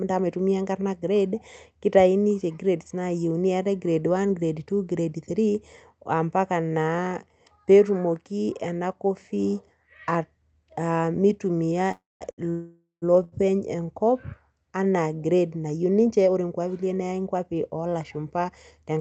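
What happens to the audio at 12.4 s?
Around 12.31 to 12.40 s there is a short stall from a late packet. A packet missed its slot, the jitter buffer ran dry, and the receiver stretched the last sound for about 71 ms until the packet turned up, then carried on from the same point. Nothing is lost; the sound is simply held too long with a faint buzzy dip. What separates it from a dropout is that the audio resumes exactly where it paused, without skipping ahead.

A tenth of a second later, from 12.50 to 13.04 s, comes a longer call audio freeze, likely caused by packets held up in transit. The receiver filled about 0.52 s by continuing the last sound as a buzz that fades, reaching roughly 150 ms of silence before the packets arrive and the audio resumes from where it stopped. Compared with the brief stall just before it, this gap is far longer and decays into silence rather than being a short held sound.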